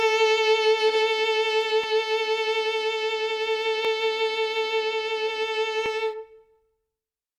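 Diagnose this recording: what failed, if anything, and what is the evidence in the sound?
Overlapping chunks at the buffer stage: in the music, clicks at 1.84, 3.85 and 5.86 s, every 2 s, each replaying 12 ms, appear as thin vertical spectrogram lines and waveform discontinuities.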